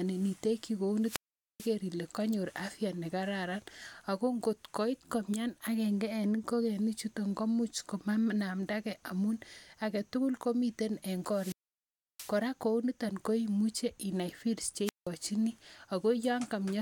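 Wireless microphone squelch dropouts at 0.98–1.76 s, 11.29–12.39 s and 14.84–15.08 s: the FM radio link fades, hiss rises, and the receiver's squelch mutes the speech for about 0.44 s, 0.68 s and 0.18 s before the signal recovers.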